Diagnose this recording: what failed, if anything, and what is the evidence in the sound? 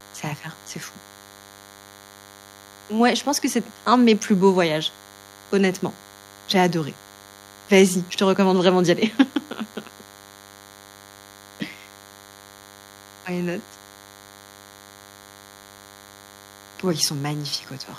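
A thin, steady buzz sits under the speech for the whole recording, well below the speech level, with a rasping edge from many harmonics above its 100 Hz fundamental. This is DECT cordless phone buzz entering the analogue wiring: a nearby handset or base transmits a radio burst every 10 ms, and an audio stage rectifies it.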